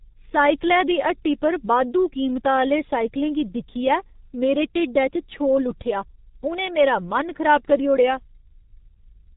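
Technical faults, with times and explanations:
Throughout, G.723.1 codec: muffled, hoarse speech with blurred consonants and nothing above 3.8 kHz, heavy damage that fits a 6.3 kbit/s coder.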